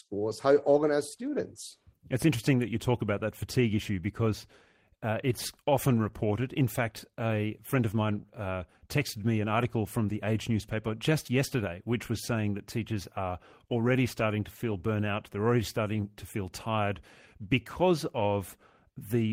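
A speech recording with no technical fault to report. Nothing in it calls for a time or a cause.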